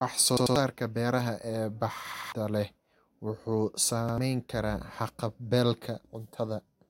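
Speech stutters three times: a roughly 93 ms fragment sounds three times at 0.37–0.56 s and 2.14–2.32 s, and twice at 4.09–4.18 s, with hard joins and about 200, 200 and 100 ms skipped. This is a repeated buffer: late data made playback replay what fits a 4096-sample buffer.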